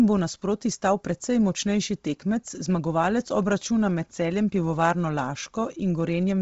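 Bluetooth LC3 compression runs from start to finish: the speech has nothing above 7.7 kHz, and its upper range carries a breathy, grainy hiss rather than clean detail. This is likely the LE Audio transform codec working at a low rate, which fits around 24 kbps with short 7.5 ms frames. Short of bits, it discards much of the high spectrum and substitutes shaped noise, so the damage is heavy and constant.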